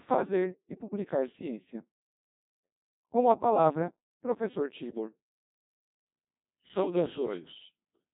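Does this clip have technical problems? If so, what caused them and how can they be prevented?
Yes. Codec 2 vocoder damage runs throughout the speech. The decoder rebuilds the voice from sine waves using only pitch, voicing, energy and spectral envelope, so it sounds heavily robotic and buzzy, with nothing above 3.8 kHz, which fits a rate around 2.4 kbit/s. To prevent it, carry the audio with a higher-bitrate waveform codec instead of a low-rate vocoder.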